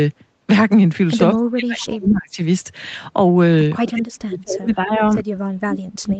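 From 1.35 to 2.41 s the talker dips sharply, by about 35 dB at the deepest, for about a second in total. This is likely speech suppressed in double talk: the echo canceller ducked this voice while the far side spoke. Within that stretch, from 1.92 to 2.16 s, a faint delayed copy of the voice trails 233 ms behind, about 15 dB below the speech. That is likely an echo leak, where the loudspeaker echo slipped past cancellation and was sent back. The same ducking returns from 3.82 to 5.01 s, again for about a second, and once more from 5.36 s to the end. Both dips reach about 40 dB and likely have the same double-talk cause.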